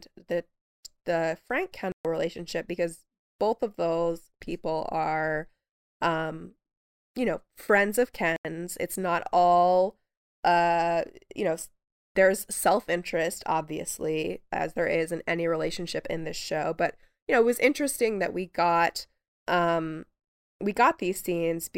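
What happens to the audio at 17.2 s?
Nothing goes wrong at 17.2 s; the speech continues through that point intact, with no dropout, click or distortion.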